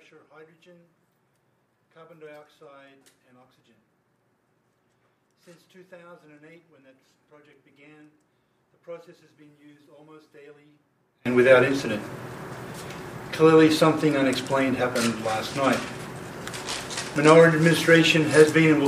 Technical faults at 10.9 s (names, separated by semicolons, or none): one channel inverted